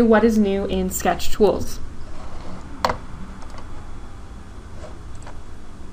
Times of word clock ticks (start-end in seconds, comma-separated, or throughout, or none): 0.36-5.92